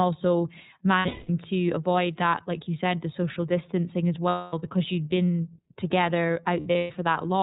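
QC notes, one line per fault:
Throughout: iLBC codec. This narrowband speech has nothing above 4 kHz, so it sounds boxed-in and a bit dull up top. The codec damage is plainly audible, with a rough, slightly synthetic edge to the voice from iLBC coding each frame's excitation on its own. The coarseness fits the 30 ms frame, 13.33 kbps mode.
0.98–1.30 s, 4.29–4.53 s, 6.60–6.97 s: lost iLBC frames. At each spot the decoder hides missing packets by looping the last pitch cycle with some noise mixed in, so you hear a held, buzzy, breathy vowel instead of real speech. The first gap suggests about 270 ms lost across 300 ms, with the longest run around a fifth of a second. The second is about 240 ms in one stretch. The third is about 240 ms scattered over 360 ms in shorter runs. The voice comes back right almost immediately each time.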